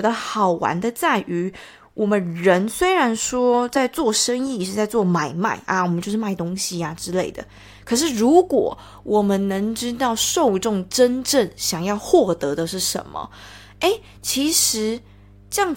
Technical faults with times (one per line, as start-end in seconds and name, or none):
6.77-15.77 mains hum